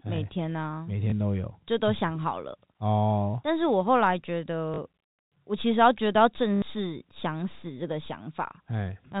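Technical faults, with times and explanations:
1.10–1.12 s, 4.74–4.78 s and 6.56–6.62 s: packet loss with last packet repeated. Audio went missing for 20, 40 and 60 ms, and the receiver replayed the preceding stretch instead, which fits 20 ms packets. The longer two become a short robotic stutter buzzing near 50 Hz. Unlike a dropout, there is no silent gap. The band stays capped at 4 kHz by the telephone coding.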